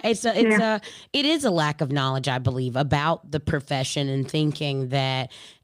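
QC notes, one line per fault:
No dropouts, clicks, distortion or level problems were found anywhere in the speech, so there is nothing to log.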